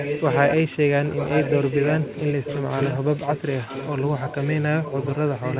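Speech with an echo leak: a copy trailing about 0.93 s behind runs at 0.0–0.56, 1.16–3.43, 3.63–4.61 and 4.82–5.6 s, fairly strong early and quieter later, likely a far-end speakerphone's echo canceller letting it through.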